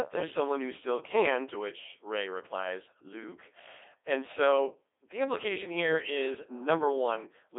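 The speech has passed through a Codec 2 vocoder for its whole length, at a rate that fits the 2.4 kbit/s mode. Instead of carrying the waveform, the link sends only pitch, voicing, energy and a coarse spectral envelope, and the decoder rebuilds the voice from sine waves. The codec damage is heavy: the speech comes out robotic and buzzy, confined to a narrow 300 Hz to 3.6 kHz line band with nothing above 3.8 kHz.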